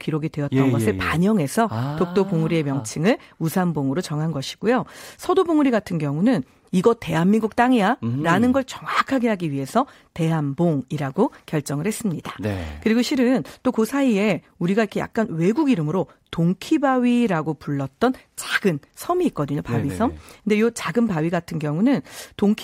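No technical faults can be heard anywhere in the speech recording. Nothing along the signal chain stands out for comment.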